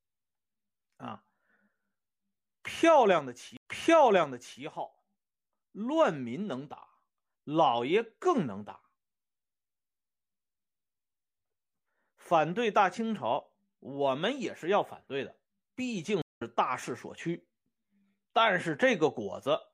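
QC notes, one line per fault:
3.57–4.62 s, stream reconnect: the speech drops out for 84 ms, then resumes about 0.97 s earlier than where it stopped, so a stretch of speech is heard twice. The connection broke, the player reconnected and the server resent a buffered burst. A fresh decoder started mid-stream, muting or fading in its first frame or two.
16.22–16.43 s, stream reconnect: a 191 ms gap, after which the speech picks up roughly 150 ms further on, so a short piece is skipped. That fits a live-stream rejoin at the current position, again restarting the decoder.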